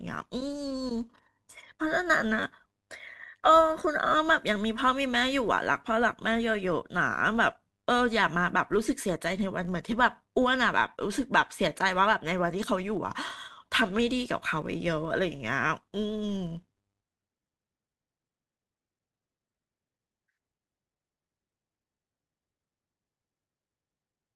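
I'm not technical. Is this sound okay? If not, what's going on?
No. A steady buzz runs through the speech from start to finish. The fault is a filter restarted on every block. The audio is processed in short chunks, and the filter forgets its state at each chunk boundary and starts over from silence. Each restart leaves a tiny click. These clicks arrive 100 times per second, which fits chunks about 10 ms long, and together they form a 100 Hz buzz that grows louder when the speech is louder.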